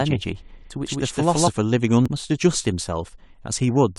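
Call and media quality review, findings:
Doubled audio track, 0 to 1.48 s: a second full-band copy trails the speech by around 150 ms at roughly the same level, no decay or room colour, already running at the start and cutting off abruptly at 1.48 s. Likely a slower second capture path or an edit leaving two offset copies.

Damaged data in the compressed stream, 2.06 to 2.08 s: short decoding glitch. Corrupted or lost bytes in the encoded stream; the decoder misread the frames, lost sync and jumped to the next header.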